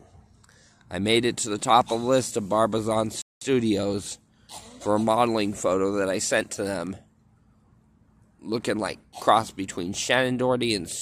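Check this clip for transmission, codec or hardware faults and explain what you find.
One fault is audible, a playback stall. From 3.22 to 3.41 s the sound stops dead for about 197 ms, likely because the player ran short of data or its thread was blocked. Unlike a brief packet-loss dropout, the gap is long and clean, with no smeared or patched-over fill.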